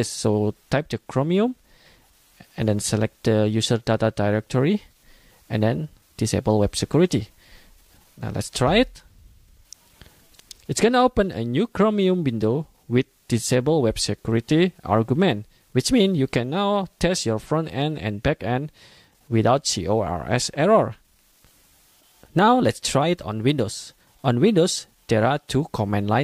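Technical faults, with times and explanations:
No technical faults detected anywhere in the recording.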